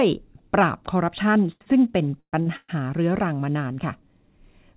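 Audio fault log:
1.52–1.77 s, 1.63–1.68 s and 2.41–2.48 s: short stall from a late packet. Each time a packet arrived late, the receiver held the last sound instead of moving on. The first stall is stretched about 85 ms, with a second stall of about 34 ms inside it, and the third about 54 ms. Nothing is lost. The sound simply lingers a moment too long. On a spectrogram the harmonics run flat and repeat briefly, and the waveform shows a short periodic stretch.
2.20–2.35 s and 2.56–2.70 s: call audio freeze, likely caused by packets held up in transit that emptied the jitter buffer. In both, the last sound is carried on as a buzz that fades out, adding about 123 ms and then about 124 ms. About 80 ms and then about 30 ms of that is silence before the audio resumes where it stopped. On a spectrogram each appears as a smeared, decaying band followed by a blank gap. The waveform tapers to a flat line. 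Across all of these, nothing shows above 4 kHz, which fits a G.711 mu-law call path.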